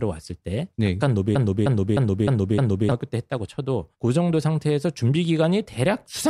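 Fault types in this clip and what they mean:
Broken-record loop: From 1.35 s to 2.92 s, one short slice of the speech repeats exactly, back to back. Each slice lasts about 307 ms. It plays five times in a row, with no change between passes. The stutter is rigid and mechanical. Whatever should have been heard in that span is gone. The likely cause is a stalled player or stream that kept resending the last fragment it held.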